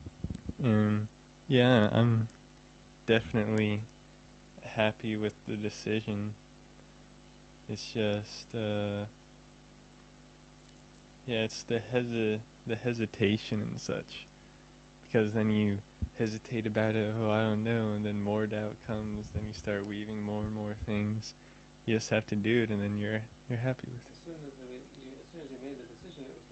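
Nothing stood out on listening, with the audio carried over a call connection whose sound extends up to about 8 kHz.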